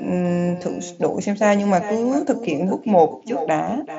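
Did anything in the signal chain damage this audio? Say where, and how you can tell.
Yes. Call processing: an echo with no canceller runs throughout. A discrete, thinner copy returns about 0.4 s later at about 13 dB down, unlike room reverb's continuous decay.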